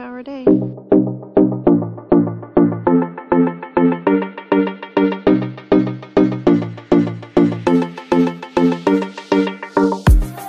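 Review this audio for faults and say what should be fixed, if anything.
Adaptive stream starting at a low bitrate, 0 to 4.0 s: the opening sounds dull, with missing treble and stronger codec artefacts, consistent with a 48 kbit/s MP3 rendition. At 4.0 s quality jumps without a gap, matching a switch to about 128 kbit/s once throughput was measured. Starting on a mid-tier rendition, or buffering briefly to estimate bandwidth before playback, would prevent it.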